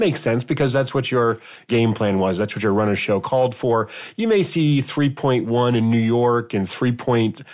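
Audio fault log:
Nothing stood out on listening to this speech recording.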